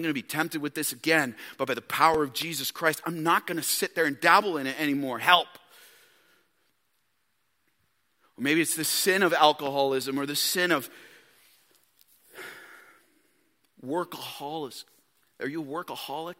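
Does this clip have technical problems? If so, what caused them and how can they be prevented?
Yes. At 2.14 s there's a repeated buffer: new audio didn't arrive in time, so a tiny chunk of about 1.3 ms played once more, which fits a 64-sample buffer. It's so short it comes across as a click rather than a stutter. A larger buffer would fix this.

There are two loud pops, at 2.42–2.44 s, roughly 10 dB above the speech, and at 9.66–9.69 s, roughly 5 dB above. Each is a single sharp pop, and the speech carries on underneath. A voltage spike from a plug, switch, static or driver glitch is the likely cause. Secure connections, avoid switching mid-take, and keep drivers stable.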